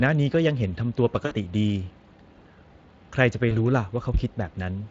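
Speex codec damage runs through the whole speech clip and is plainly audible. Speex is a CELP coder that models the voice as a filter driven by a coded excitation. The roughness here points to a bitrate around 20 kbps, which leaves too few bits for that excitation. The speech comes out noisy and hoarse rather than a clean, stable tone.

VoIP packet loss concealed by the speech codec first strikes from 1.25 to 1.35 s, a stretch of about 0.1 s in which three 20 ms frames, 60 ms in all, were lost. The decoder fills the hole by repeating its last pitch and filter at falling gain, so the sound smears into a fading buzzy tone or coloured noise. A second, shorter dropout follows from 3.49 to 3.57 s, consistent with a single lost frame. It brings a brief concealed patch, and the voice stays weak or distorted for tens of milliseconds as the decoder recovers.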